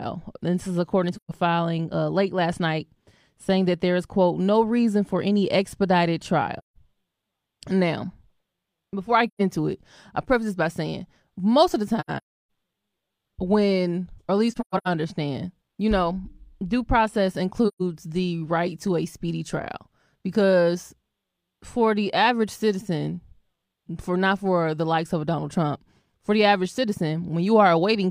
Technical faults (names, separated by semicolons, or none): AAC frame loss with muting